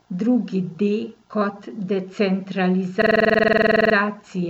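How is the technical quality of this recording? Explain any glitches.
A system hang loop runs from 3.02 to 3.95 s. The machine or its audio driver stalled while the sound hardware kept replaying the same stretch of its ring buffer. A single 46 ms slice of speech repeats exactly, roughly twenty times, at about 21.5 Hz, which fits a 2048-sample buffer. That slice is long enough to come through as a rapid machine-gun stutter rather than a steady buzz, until playback resumes with essentially no speech skipped.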